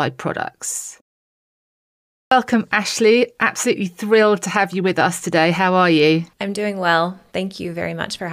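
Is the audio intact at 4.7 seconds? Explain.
Yes, the speech at 4.70 s plays through intact, with no fault at that moment.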